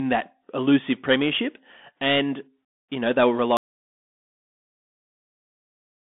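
From the start, the speech carries Bluetooth CVSD headset codec damage. The band is squeezed to roughly 200 Hz to 3.5 kHz with nothing above 3.8 kHz. Its one-bit delta coding, consistent with a 64 kbps headset link, leaves scratchy sibilants, a granular hiss and distortion on loud high sounds.

At 3.57 s the audio drops out to silence and stays silent to the end. The cut is abrupt, with no room tone left, which points to a likely lost input while the recorder kept writing silence.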